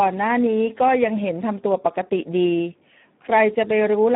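From start to end, the speech has passed through the Speex codec at a low quality setting, which fits a bitrate of about 8 kbps, so too few bits describe the excitation. The result is hoarse and noisy, confined to roughly 150 Hz to 3.6 kHz, with nothing above 3.8 kHz.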